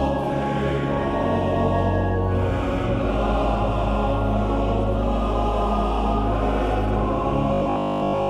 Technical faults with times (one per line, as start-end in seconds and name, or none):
7.54-8.30 robotic sound from repeated short buffers